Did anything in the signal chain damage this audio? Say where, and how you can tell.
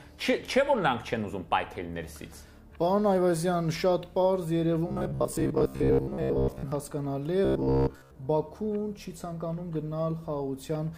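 Yes. Robotic sound from repeated short buffers, 4.88 to 6.72 s and 7.45 to 8.15 s: a rigid 66.7 Hz buzz runs through the sound. This points to a driver or buffer stage likely repeating a 15 ms block while most of the real audio is skipped.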